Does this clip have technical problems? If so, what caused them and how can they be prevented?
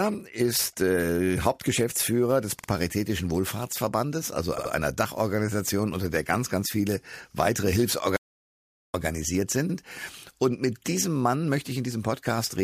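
Yes. Repeated frames cause stutters at 2.58, 4.57 and 9.69 s. A 48 ms block replays twice, then 72 ms blocks replay twice and once. Checking frame sequence numbers during writing or transmission prevents this.

An audio dropout to silence follows "ganz ganz viele weitere" from 8.17 to 8.94 s. Sound vanishes into total silence, with no room tone, likely from lost input. Secure connections and monitoring input levels prevent this.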